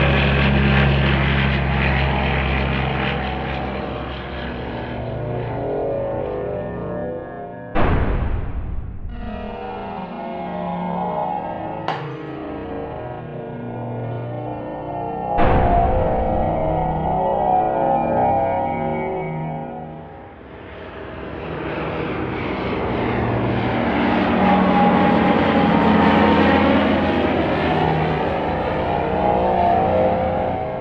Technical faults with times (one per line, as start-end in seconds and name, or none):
none